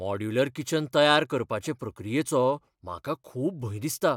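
Nothing in the speech stood out as a technical problem on listening.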